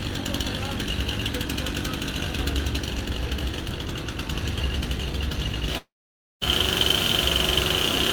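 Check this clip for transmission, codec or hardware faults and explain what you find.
One transmission fault is present: a long network dropout at 5.77–6.43 s, likely caused by packets not arriving. The receiver stretches the last sound into a brief fading buzz, then leaves about 0.53 s of silence. Playback resumes with about 0.64 s of audio gone. On a spectrogram, the smeared tail gives way to a blank band. The waveform flattens to a line before abruptly restarting.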